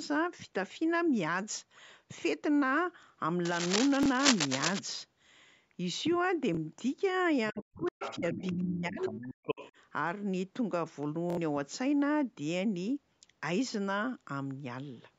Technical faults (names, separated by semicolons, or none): cable scratch noise; Bluetooth stutter; other side's voice leaking through; speech suppressed in double talk